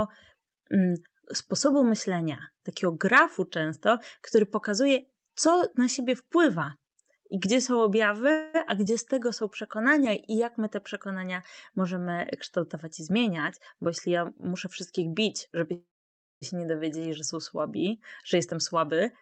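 At 8.31 to 8.56 s the sound stretches into a fading buzz for about a quarter second, then resumes intact: a call audio freeze, likely from delayed packets draining the jitter buffer. From 12.82 to 13.30 s the speech rushes at 107% speed with unchanged pitch. This is a jitter buffer speed-up, where the receiver trims pitch periods to shed excess buffered delay, here a few tens of milliseconds. The same hurried delivery returns from 13.74 to 15.66 s at 106%, cutting roughly 150 ms. At 15.73 to 16.43 s a longer call audio freeze follows. The last sound decays into silence lasting over half a second, and the speech then carries on where it stopped, likely after another packet stall. From 18.34 to 19.04 s a final speed-up at 107% trims about 50 ms. Throughout, the audio is cut off above 8 kHz, consistent with an Opus call path at around 32 kbps.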